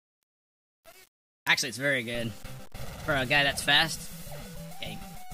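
From the first moment to the end, the audio carries grainy distortion that rises and falls with the sound: quiet passages turn gritty and the faintest tails sputter or drop to nothing. This is likely low bit depth without dither, the signal rounded to very few levels, which fits about 7 bits, leaving error roughly 25 dB below the signal. On a waveform, quiet stretches show visible staircase steps; a spectrogram shows hashy noise that appears and vanishes with the sound.

Starting at 0.16 s and running to 5.32 s, sharp ticks of uneven strength repeat about every 0.07 s, some seventy in all. These are word clock ticks: the receiving device runs on its own clock, a few hundred parts per million off the sender's, so each time the two slip past each other a single sample is dropped or repeated. A spectrogram shows thin vertical lines at an even spacing, and the waveform shows a tiny one-sample jump at each.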